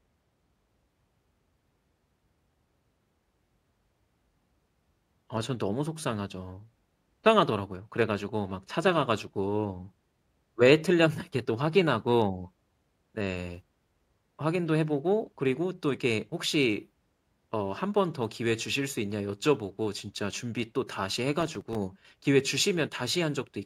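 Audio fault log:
21.41–21.75 s, processor overload crackle. A short burst of gritty crackle tears across the speech for about a third of a second, then stops. The sound points to very short buffers, around a millisecond and a half each, missing their deadlines several times in a row. Each miss replays a scrap of old audio with hard edges. Those abrupt splices land close together, so they merge into a rough tearing texture on top of the sound.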